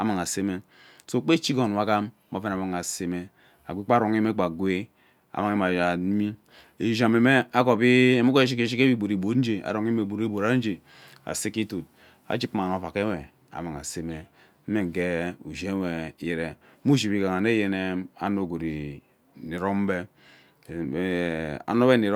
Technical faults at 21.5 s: none

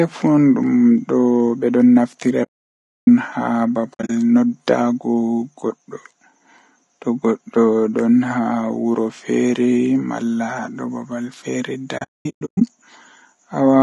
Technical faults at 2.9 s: low-delay AAC compression; AAC frame loss with muting

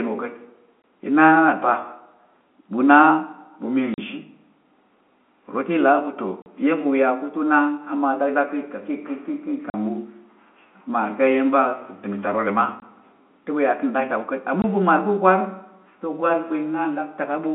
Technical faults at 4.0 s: packet loss filled with silence

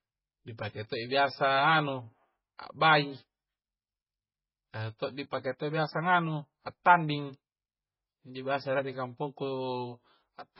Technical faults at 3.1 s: MP3 compression

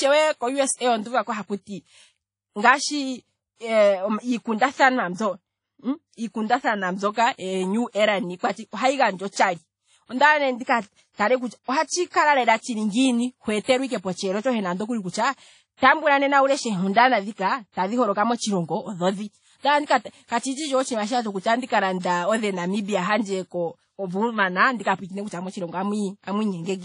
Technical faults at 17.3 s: WMA compression

